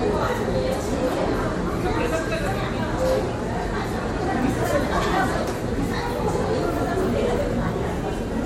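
No technical faults are audible.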